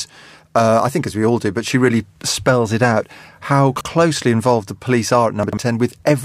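A speech clip with chunks out of order at 3.76 to 3.85 s and 5.43 to 5.57 s. Short blocks of about 46 ms each play one and then two blocks late, so the sound jumbles briefly. On the waveform and spectrogram, abrupt vertical discontinuities mark each swapped boundary.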